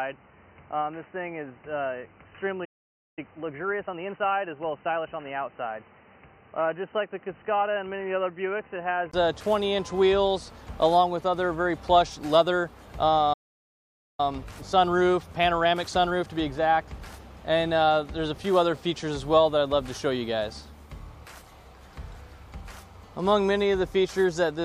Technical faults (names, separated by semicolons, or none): input switched to a poorer device; playback stall; time-compressed catch-up